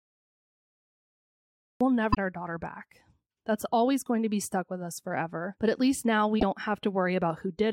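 Speech, and it opens with a cut-off start: digital silence runs from 0 to about 1.81 s, then the talking kicks in mid-sound with no natural attack or fade, so the recording or stream clearly began late and caught the speaker partway through. There's also damaged data in the compressed stream at 2.10 to 2.17 s and again at 6.36 to 6.43 s. Each is a short glitch of about 70 ms where the decoder hit corrupted frames, lost sync and had to hunt for the next valid frame header.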